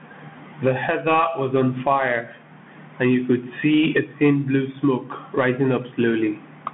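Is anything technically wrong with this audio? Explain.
Yes. The whole clip runs through a Bluetooth CVSD headset codec: speech squeezed into a phone-style band of about 150 Hz to 3.5 kHz, with nothing above 3.8 kHz. The one-bit adaptive-step coding, which fits a 64 kbps CVSD link, leaves scratchy s sounds, distorted loud highs, and a granular hiss underneath.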